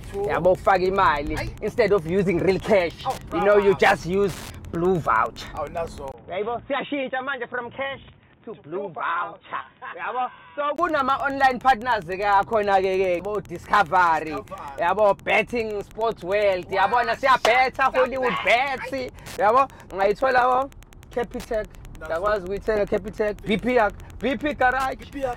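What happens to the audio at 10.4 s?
From 6.12 to 10.78 s the sound turns dull and boxy, with nothing above 3.8 kHz. It drops around 10 dB, over a new noise floor roughly 40 dB down. This is likely an input switched to a poorer device, with a short silence of about 20 ms at the change. Wi-Fi interference also runs through this moment. A nearby radio's beacon, rectified by the circuit, ticks every 102.4 ms, around 30 dB below the sound.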